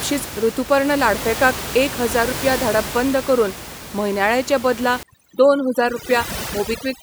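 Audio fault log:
5.03–7.03 s, overdone noise removal: right after "करून म्हयन्याळें चे बदला" the background drops and breaks up into twinkling specks. Noise reduction set too strong is switching off frequency bands that sit near its noise estimate, taking the softer parts of the speech with them.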